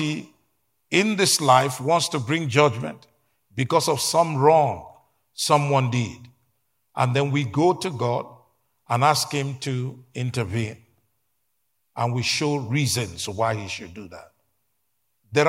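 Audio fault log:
0.14–15.49 s, clock slip clicks: a faint, steady tick runs under the speech about ten times a second, and it's clearest on the louder stretches. Each tick is a single sample being dropped or repeated. The likely cause is two devices running on unsynchronised clocks, off by something like 200 ppm, so a whole sample of drift builds up roughly every tenth of a second.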